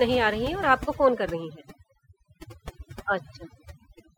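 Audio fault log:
throughout: overdone noise removal. Noise reduction set far too strong pulls bands near the noise estimate down to nothing, leaving a lowered background broken into twinkling specks.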